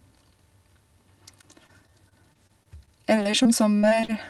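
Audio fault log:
1.41–4.14 s, repeated packet loss (robotic sound): sixteen short holes, the longest 34 ms, are patched by stretching the preceding sound, making speech choppy. About 12% of this stretch is concealed. The spectrogram shows smeared, repeated frames and brief breaks below the call codec's 12 kHz ceiling.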